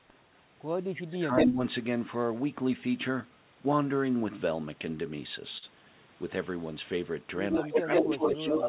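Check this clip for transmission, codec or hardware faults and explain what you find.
Yes, three kinds of fault are audible. The narrowband sound, with nothing above 4 kHz, fits a G.711 call path and is not itself a fault.

From 0.9 to 1.6 s, and again from 7.61 s to the end, the speech dips. This is likely speech suppressed in double talk. The canceller turned the talker down with the echo. The first dip reaches about 20 dB and lasts roughly half a second. The second dip is about 10 dB.

At 1.36 to 1.47 s, and from 7.51 s to the end, a delayed copy trails the speech by 136 ms. This is likely an echo leak. The canceller let loudspeaker pickup through, at about 5 dB relative to the speech.

At 5.58 s there is a short stall from a late packet. The jitter buffer ran dry, so the last sound is held for 43 ms. Nothing is lost, but that moment sounds briefly smeared.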